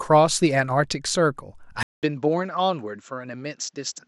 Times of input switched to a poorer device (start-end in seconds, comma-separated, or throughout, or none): 1.83-4.08